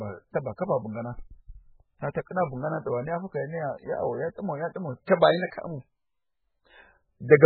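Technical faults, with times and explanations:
Throughout: MP3 compression. Nothing reaches above about 4.5 kHz, so the speech sounds dull and boxed in. The damage is heavy. The sound is watery and swirls, and sibilants turn into metallic chirps. Onsets smear instead of landing cleanly. The likely cause is an MP3 encoder starved of bits, which fits a rate near 8 kbps. It cuts the treble at a fixed point and drops weak frequency lines, which flicker on and off from frame to frame.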